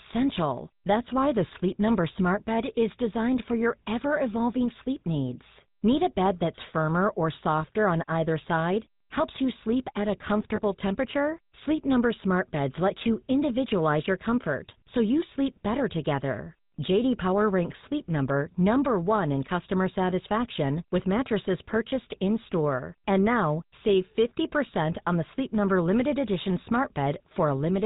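Speech heard through the GSM full-rate codec throughout, with a buzzy, gravelly roughness consistent with 13 kbps. The spectrogram shows nothing above 4 kHz and a coarse, pulse-driven harmonic texture. Lost GSM frames at 6.56–6.59 s and 10.56–10.60 s are each bridged by repeating the last good frame's settings, giving a brief metallic ring consistent with a single 20 ms frame. The waveform shows a short, smeared patch there.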